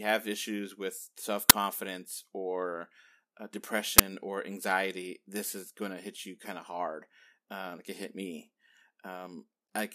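At 1.50 s and again at 3.98 s, the playback path sent out a buffer before any audio had been written into it, so whatever stale values sat in that memory were played as if they were samples. Each time this uninitialised buffer produces a sudden, loud crack cutting into the speech, lasting about 11 ms, which fits a 512-sample buffer.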